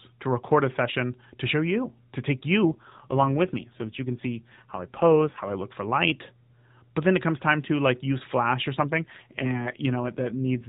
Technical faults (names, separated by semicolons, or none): AMR rate drop